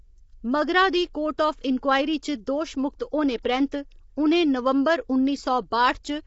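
From the start the speech sounds rough and grainy, with a dull upper range. This is low-delay AAC compression, likely AAC-ELD at a low rate, which fits roughly 24 kbps. At this low rate its coarse quantisation lets noise fill the gaps between the voice's pitch harmonics. On a spectrogram the harmonic stripes look smeared and speckled with noise, and nothing appears above 7.7 kHz, where the image is cut off flat.

At 1.38 s, between "मगरा दी" and "आफ इन्क्वायरी", there is pre-echo: a short hiss about 10 ms long arrives just before a sharp onset, which sounds softened. The attack fell late in a transform block, and the codec spread that block's noise, sized for the loud part, across the quiet moment before it. On a waveform a low fuzzy ramp precedes the transient, and on a spectrogram a thin broadband smudge sits just ahead of it.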